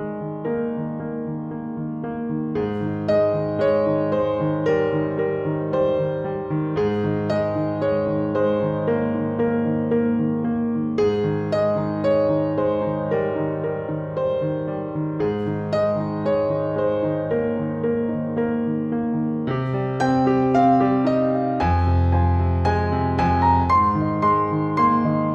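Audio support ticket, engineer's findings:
No faults found on listening; nothing in the playback needs action on this ticket.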